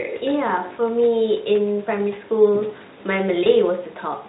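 At 3.43 to 3.47 s, VoIP packet loss concealed by the speech codec smears the speech into a brief buzzy tone or coloured noise that fades rather than a silent gap, which fits a single lost 20 ms frame.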